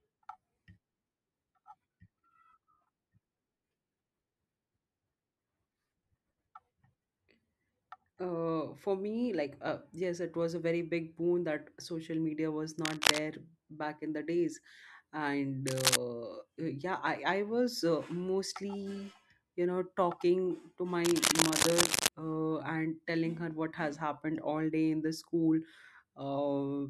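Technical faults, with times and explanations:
12.84 to 13.19 s, cable scratch noise: between "social media was" and "back in the days", a rough burst of scratching sits over the speech. It runs roughly 5 dB above the speech itself. The likely cause is a worn cable or connector being moved. Its contact resistance jumps about quickly, so dense, uneven noise is added to the signal. That is why it sounds like rustling rather than a steady hiss.
15.67 to 15.97 s, cable scratch noise: a shorter burst of the same rustling, again roughly 5 dB above the speech. It lasts about 0.3 s. The crackle is irregular, with no steady pitch or rhythm. That fits a loose contact that is briefly disturbed, so its resistance flickers and dumps bursts of noise into the audio before it settles again.
21.05 to 22.08 s, cable scratch noise: the longest burst, just over a second, between "you know talking to" and "uh and telling her". 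The scratching is loud, roughly 5 dB above the speech. Sustained handling of the same contact would likely keep the resistance changing for longer, which is why the noise persists rather than dying quickly.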